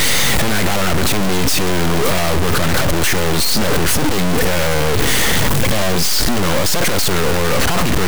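Throughout the speech, a harsh, buzzy distortion rides on every sound, and pauses fill with loud noise instead of falling silent. This points to a stuck bit, likely a high-order data bit held fixed, offsetting about half the samples by about -10 dBFS.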